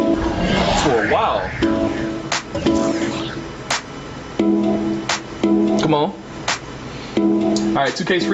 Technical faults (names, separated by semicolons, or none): gain pumping